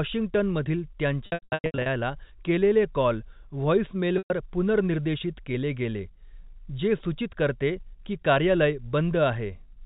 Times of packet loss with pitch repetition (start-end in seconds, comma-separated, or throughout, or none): 1.26-1.86, 4.18-4.30